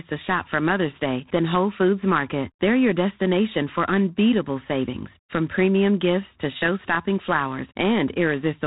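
The speech has passed through G.726 ADPCM coding at a low rate, which fits 24 kbit/s, storing each sample as a few bits of error against a running prediction. Throughout, a harsh, rasping hiss rides on the voice and rises with its level, and nothing above 3.9 kHz survives.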